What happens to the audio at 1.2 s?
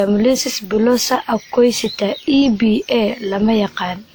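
At 1.2 s the speech carries generation loss, present across the whole clip: it sounds swirly, hollow and smeared, with soft attacks, most likely from about five successive WMA encodes at 96 kbit/s on shifting frame grids. A spectrogram shows smearing below a band edge near 20.1 kHz.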